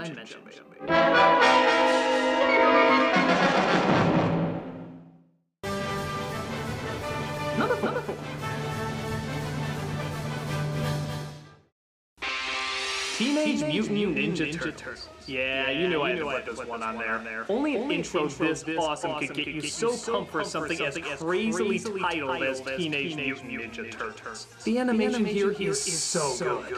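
A doubled audio track runs throughout the clip: every sound is followed by a second copy of itself roughly 300 ms later, around 5 dB quieter than the original. The copy is full-band and dry, with no decay or room colour, so it reads as a clean stutter rather than an echo. The likely cause is the same signal reaching the mix twice, once directly and once through a slower capture path.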